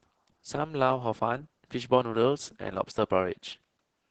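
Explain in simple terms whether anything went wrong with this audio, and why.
Something did go wrong, and it lasts from start to finish across all four seconds of the recording. The speech has been squeezed hard by Opus voice compression, using its speech-oriented coder. To save data, the coder keeps nothing above 8 kHz, which dulls the crisp edges of the sound, and it describes the buzz of the voice only roughly. The result is speech that sounds muffled and hoarse, with a faintly robotic quality throughout.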